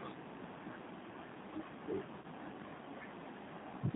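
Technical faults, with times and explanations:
throughout: G.729 codec. The audio is band-limited to about 150 Hz to 3.7 kHz, with plainly rough, synthetic speech texture consistent with an 8 kbit/s pulse-coded stream.
2.22–2.25 s: VoIP packet loss concealed by the speech codec. About 20 ms, fitting a single lost packet, is replaced by a fading extrapolation of the previous pitch, then weak recovery.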